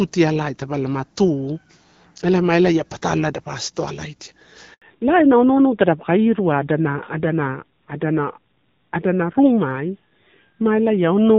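At 4.74 s, right after "elapa astowalaidia", the speech cuts out for 80 ms until 4.82 s. This is a handover gap. The call switched networks and no speech frames arrived during the switch. The voice falls away quickly, and whatever was said then is lost.

From 4.82 s to the end there is a fallback to narrowband. Before this, the light HD Voice coding sounds like AMR-WB at about 12.65 kbit/s. Now nothing above 4 kHz remains. The speech turns dull and rougher, which fits AMR-NB at a low rate near 7.4 kbit/s.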